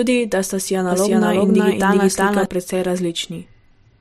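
It's a speech clip with a doubled audio track: right after "da sta si", from 0.92 to 2.46 s, a full-band copy trails about 400 ms behind at roughly the same level, cutting in and out abruptly, likely from a second, slower capture path.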